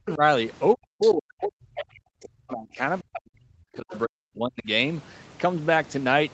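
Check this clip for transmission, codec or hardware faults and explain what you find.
Two kinds of fault are audible, both tied to echo cancellation. The band stops near 8 kHz, as expected for this call path.

Speech suppressed in double talk, 0.00–0.21 s, 0.75–2.81 s and 3.02–4.68 s: the talker's speech sinks or breaks up, with drops of roughly 40 dB at the deepest. The likely cause is the echo canceller muting both voices during overlap.

Other side's voice leaking through, 1.01–1.12 s and 3.9–3.98 s: brief faint scraps of a second voice, about 15 and 20 dB below the speech. This is likely loudspeaker echo that the canceller left behind.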